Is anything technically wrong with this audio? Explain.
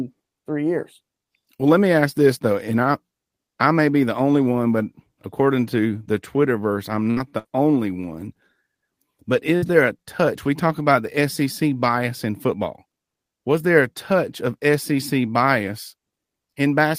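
Yes. From 7.03 to 7.47 s there is repeated packet loss, giving a robotic sound. Four gaps, the longest 61 ms, were patched by extending the preceding sound, so about 39% of the stretch is concealed and about 120 ms is missing. It sounds choppy. A spectrogram shows smeared, repeated harmonic blocks broken by abrupt seams.

At 9.56 to 9.65 s a burst of packet loss leaves about 60 ms missing, and a gap of about 57 ms is filled by continuing the last sound while lowering its level. The speech then picks up further on. On the waveform this looks like a decaying, repetitive stretch followed by a sudden resumption.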